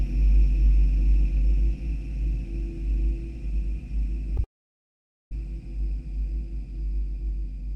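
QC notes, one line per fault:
4.37 s, short concealed packet loss: about 10 ms of audio never reached the decoder in time, and the receiver covered the hole by extending the preceding sound before blending back into the real signal. This leaves a brief smear or wobble at that instant.
4.44–5.32 s, long network dropout: the sound gives way to a short fading continuation of itself and then about 0.84 s of silence. This is likely a network stall of roughly 0.87 s, so audio resumes at 5.32 s with that stretch lost.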